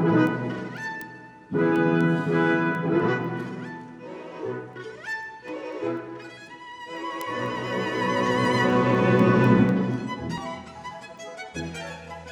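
From about 0.27 s right through to 12.17 s there's a steady train of word clock ticks, around fifty of them, landing roughly every third of a second. Sharp little clicks, not all equally loud. The receiving device is running on its own clock instead of locking to the sender's digital link, and the two drift apart by something on the order of 100 ppm, so each time they slide past, a single sample gets dropped or doubled and you hear a tick.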